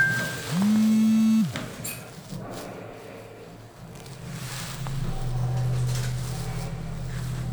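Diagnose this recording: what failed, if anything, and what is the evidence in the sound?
No failure is audible at any stage of the chain, and the signal carries on steady and continuous with nothing to point to in the wiring, conversion, buffering, coding, network or playback path.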